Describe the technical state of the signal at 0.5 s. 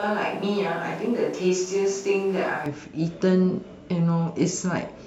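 Roomy, hollow speech with thin bass, about 5 dB quieter than later, and room noise roughly 25 dB below the voice. This is likely a switch to a distant microphone, already under way when the clip begins and lasting until 2.66 s, where the close pickup abruptly returns.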